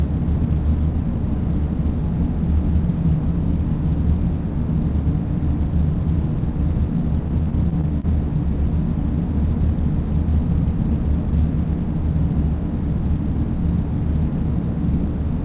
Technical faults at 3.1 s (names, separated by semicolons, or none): none